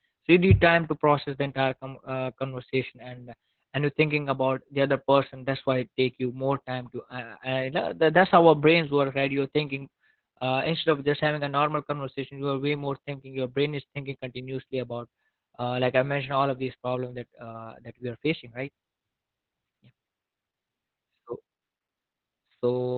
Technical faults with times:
0.00-22.97 Opus voice compression

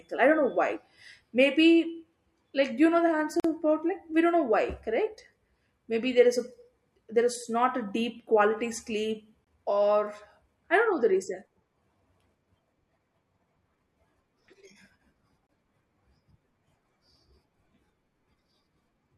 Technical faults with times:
3.40-3.44 gap at a join of encoded pieces
9.44-9.47 gap at a join of encoded pieces
15.47-15.49 gap at a join of encoded pieces

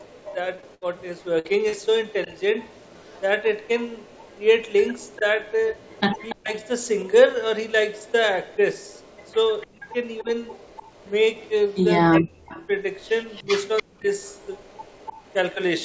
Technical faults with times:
0.00-6.88 echo leak
0.56-0.64 short concealed packet loss
0.74-0.83 burst of packet loss
1.39-1.47 burst of packet loss
1.69-1.74 short concealed packet loss
5.18-5.25 speech suppressed in double talk
6.35-6.54 speech suppressed in double talk
7.94-11.84 echo leak
9.66-10.30 speech suppressed in double talk
12.09-12.69 speech suppressed in double talk
12.46-15.85 echo leak
13.41-14.10 speech suppressed in double talk

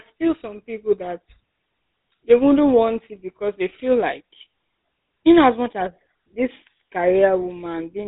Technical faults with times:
0.00-8.07 GSM full-rate codec

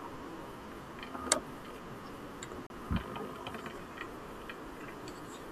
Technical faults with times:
2.67-2.70 gap between stream segments

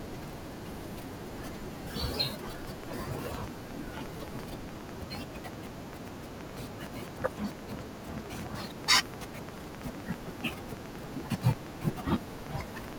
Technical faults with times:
2.65-12.94 train of clicks

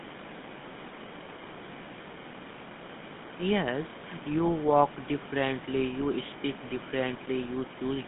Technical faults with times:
0.00-8.08 GSM full-rate codec
4.48 GSM bit errors

